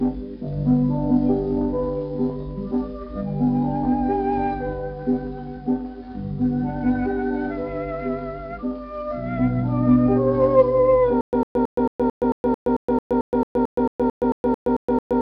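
Stutter with silent gaps from 11.21 s to the end: a 103 ms burst repeats at a steady 222 ms period, with about 120 ms of digital silence between repeats, likely from a stalled stream replaying its last fragment on each retry while the intended audio is lost.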